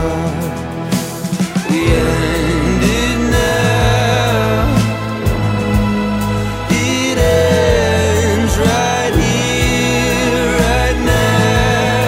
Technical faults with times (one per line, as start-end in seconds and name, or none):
none